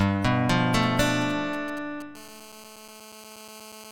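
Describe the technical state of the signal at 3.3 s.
At 3.3 s the audio carries GSM phone buzz. It runs from 2.16 s to the end at 3.91 s. A nearby phone on a call transmits in bursts, and the audio circuit rectifies them. The result is a steady, raspy 217 Hz buzz with dense harmonics, about 20 dB below the signal.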